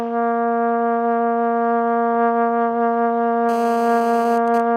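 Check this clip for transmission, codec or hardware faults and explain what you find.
Two kinds of interference from a nearby 2G handset are audible, both late in the clip.

From 3.49 to 4.38 s there is GSM phone buzz. A phone in an active call transmits its radio bursts 217 times a second, and somewhere in the audio circuit those pulses are rectified into a baseband signal. The result is a hard, raspy buzz at 217 Hz, about 18 dB below the wanted sound and unrelated to it. On a spectrogram it shows as a comb of evenly spaced horizontal lines at 217 Hz and its many harmonics, reaching well up in frequency. The waveform carries a regular train of sharp-edged pulses.

From 4.48 to 4.60 s come GSM signalling bursts. The phone is still in the call, but its user has stopped talking, so it sends only short groups of bursts instead of a continuous stream. After rectification these become even 217 Hz ticks, around 20 dB below the signal. 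A spectrogram shows short vertical clusters of the same harmonic comb separated by gaps. The waveform shows small, isolated packets of spikes.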